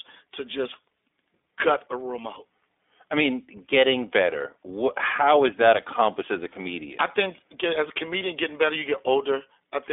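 Throughout, the speech has passed through the iLBC codec, which encodes each short frame, consistent with 20 ms frames at about 15.2 kbps, independently and cuts everything outside roughly 300 Hz to 3.6 kHz. The result is thin, band-limited speech with a plainly audible rough, synthetic edge.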